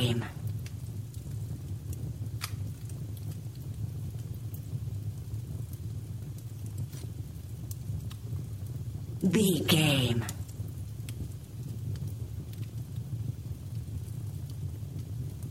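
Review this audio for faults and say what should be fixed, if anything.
No faults found; nothing needs fixing.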